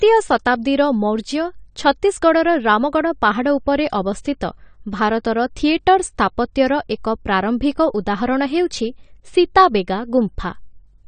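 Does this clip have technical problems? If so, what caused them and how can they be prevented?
Yes. Throughout the speech, the sound is dull and smeared, with nothing above 9 kHz and a warbling, fizzy texture on sibilants and sustained sounds. The likely cause is AAC compression: the encoder has cut the top band and coarsely quantised what remains, which fits AAC-LC at around 32 kbps. Encoding at a higher bitrate such as 96 kbps or more, or keeping a lossless master, would prevent it.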